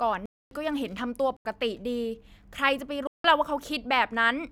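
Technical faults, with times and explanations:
0.26–0.51 s, 1.37–1.45 s and 3.07–3.24 s, block of digital silence: the speech drops to silence three times, for 256 ms, 85 ms and 171 ms, with no fade in or out. Each abrupt cut and return leaves a clear hole in the speech. The two later gaps, exactly double each other, fit 4096- and 8192-sample blocks at 48 kHz, pointing to output buffers that were not filled in time.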